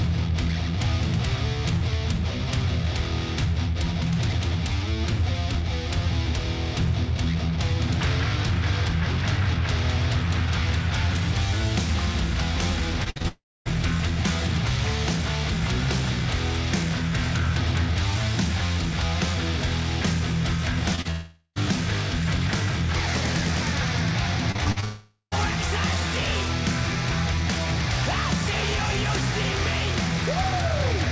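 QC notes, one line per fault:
13.04–13.26 s, repeated packet loss (robotic sound): the sound turns choppy over about 0.22 s, with four holes, the longest about 59 ms. The receiver patched each gap by extending the last bit of audio, and just over half of this stretch is that patching. The run of stitched, repeated fragments gives it the mechanical character.
13.28–13.67 s, long network dropout: a fading buzz trails off into roughly a quarter second of silence, then the audio resumes with about 0.38 s gone. The likely cause is a network stall in which nothing arrived. The receiver stretched the last sound until it ran out, and that stretch never came back.
20.95 s and 21.01–21.07 s, short concealed packet loss: two brief smears, each heard as a small wobble. Around 20 ms and then about 40 ms of audio missed the decoder. Each hole was bridged by continuing the preceding sound and blended back in, so the texture blurs.
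21.11–21.58 s, long network dropout: a smeared, drawn-out sustain lasting almost half a second, with only a hint of silence at its tail. About 0.44 s of audio likely never arrived. The concealment held the last sound for nearly the whole gap, so it sounds stretched rather than cut.
24.52–24.84 s, repeated packet loss (robotic sound): another choppy, robotic patch of about 0.33 s with five gaps, the longest about 43 ms. Roughly two fifths of the span is filled-in audio, a smaller share than at 13 s.
24.84–25.34 s, long network dropout: straight after that run, a fading buzz into a short silence, and the sound returns with about 0.48 s missing. The likely cause is lost network delivery, masked by extending the last audio until it faded.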